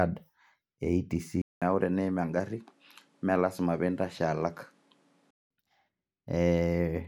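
An input switched to a poorer device, from 1.42 to 5.51 s, is the likely cause of the change in this speech clip. After a 200 ms silence, the sound turns duller, with nothing above 13 kHz, drops a few decibels in level, and gains a new background noise about 35 dB below the speech. At 5.51 s the full bandwidth and original tone return, consistent with recording moving to a narrower-band microphone and then back.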